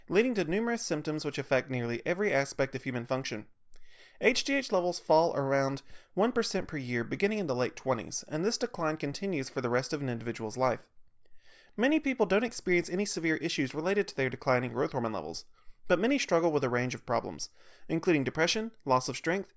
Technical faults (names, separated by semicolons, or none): none